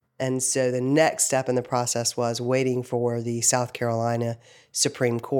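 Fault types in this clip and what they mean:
No fault types are present in this clip.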